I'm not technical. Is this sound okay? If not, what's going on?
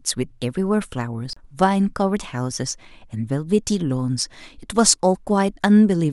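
No, there's a CD skip at about 1.33 to 1.37 seconds. The player lost its place on the disc, went silent for a split second, and picked up the speech from a different spot, so the speech suddenly jumps.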